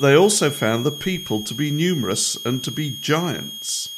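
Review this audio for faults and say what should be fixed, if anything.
A switching supply whistle runs under the speech throughout: a high tone wandering between 3.23 and 3.33 kHz, roughly 15 dB below the speech. A nearby switch-mode supply is cycling at an audible rate. On a spectrogram it shows as a thin, slightly wavering horizontal line near 3.3 kHz. Fix it by powering the recording chain from a linear or well-filtered supply, or by moving the offending adapter away from the audio gear.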